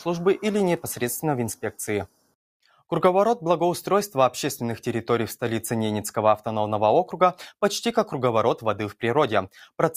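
From 2.07 to 2.35 s the audio sinks by about 18 dB for roughly a third of a second: sound cut by the noise suppressor, which mistook it for noise.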